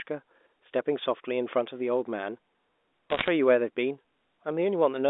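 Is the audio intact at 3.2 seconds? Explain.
No, from 3.10 to 3.28 s there are bit errors on the digital phone line: roughly one bit in a hundred flips, each spoiling a sample, so sharp ticks crackle over the speech.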